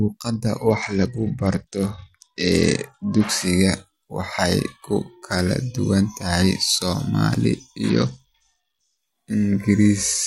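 Bluetooth SBC bit pool drops occur from 0.68 to 3.29 s and from 7.89 to 8.98 s. The link appears to have cut the encoder's bit budget, which fits a fall from a bit pool of 28 to 9, around 78 kbps. The top sub-bands starve and the rest quantise coarsely, so the speech turns dull and gritty until recovery.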